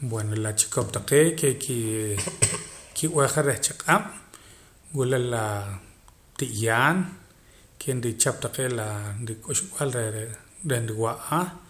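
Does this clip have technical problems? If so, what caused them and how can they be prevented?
No, there are no technical problems in this recording.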